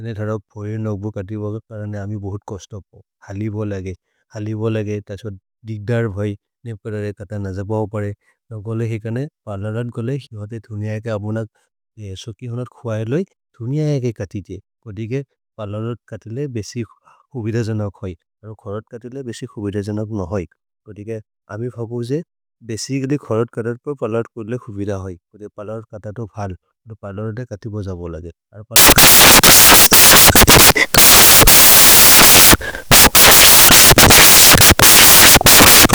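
Speech that, from 28.76 s after "खतिबज बोल् अगे अरु" to the end, turns into loud, harsh broadband noise: samples built from the wrong bytes, with the low bits read as the high ones.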